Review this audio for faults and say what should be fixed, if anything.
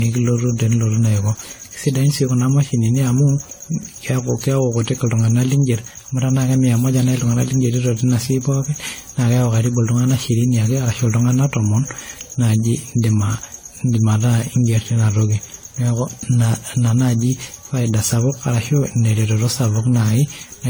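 Generation loss runs through the whole clip. The speech sounds swirly, hollow and smeared, and consonant attacks blur. This likely comes from about seven rounds of lossy encoding, consistent with AAC-LC at 64 kbit/s. Each pass quantises on a shifted frame grid, so noise and spectral holes pile up. To prevent it, edit from the original recording and encode only once, at the end.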